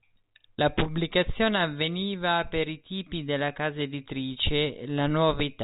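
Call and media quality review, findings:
No faults found in the speech; the band stops at about 3.8 kHz, consistent with G.711 mu-law telephone coding working as intended.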